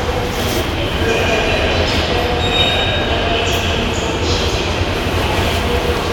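No technical faults are audible.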